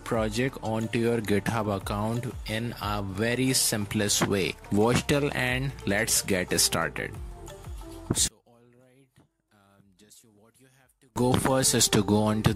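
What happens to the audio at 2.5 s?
Nothing goes wrong at 2.5 s: the audio plays through that moment intact, with no dropout, click or other fault to be heard.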